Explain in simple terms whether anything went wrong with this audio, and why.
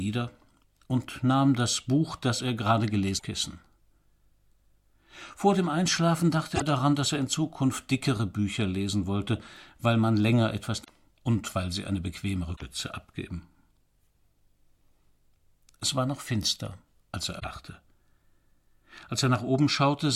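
Something did go wrong, five times. Each time there is a short blip of damaged data in a compressed stream, at about 3.15, 6.52, 10.80, 12.53 and 17.36 seconds. Each lasts under a tenth of a second. Part of the compressed file was broken there. The decoder could not read those bits properly, lost its place, and had to hunt for the next clean starting point. That stumble comes out as a brief chirp or squawk.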